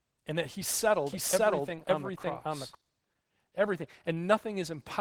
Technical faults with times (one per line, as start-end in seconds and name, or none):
0.00-5.00 Opus voice compression
1.07-2.75 doubled audio track